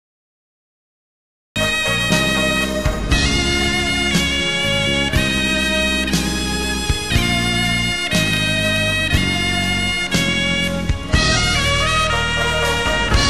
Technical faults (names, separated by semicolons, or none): cut-off start